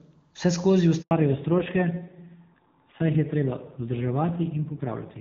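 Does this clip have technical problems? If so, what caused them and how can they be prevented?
Yes. There is a handover gap from 1.01 to 1.11 s, about 100 ms long. The call switched networks and no speech frames arrived. The sound drops out quickly and stays silent until the new link starts. Prevention: tune handover settings so both links overlap briefly before the old one is released.

From 1.11 s to the end there is a fallback to narrowband. Before it, the sound is clear and wideband, which fits a high-rate HD Voice mode. Afterwards nothing remains above 4 kHz. The sound turns dull and rough, which points to a low-rate narrowband codec. Prevention: ensure the target network supports HD Voice so the call keeps its wideband codec.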